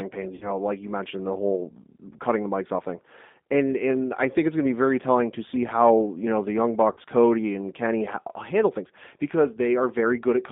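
Throughout the speech, the G.729 codec at 8 kbit/s rebuilds each frame from a vocal tract filter, a pitch predictor and a few pulses, leaving a rough, slightly synthetic grain. A spectrogram shows energy confined between 200 Hz and 3.6 kHz, with nothing above and a bare floor below.

From 0.35 to 0.51 s, and again from 6.93 to 7.00 s, there is VoIP packet loss concealed by the speech codec. About 60 ms and 40 ms of audio went missing, which fits three and then two lost packets. The decoder repeats its last pitch and filter at falling gain, producing a fading buzzy tone or coloured noise. On a waveform this appears as a shrinking envelope. On a spectrogram it shows as smeared energy before normal detail returns.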